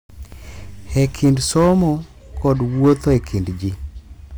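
A stage in the signal chain was driven about 5 dB past the most it could pass, so hard clipping cut the speech peaks flat in two stretches, from 0.97 to 1.81 s and from 2.45 to 3.17 s. Those squared-off tops add harmonics high up the spectrum, and the peaks in both spans come out with a crackle laid over them.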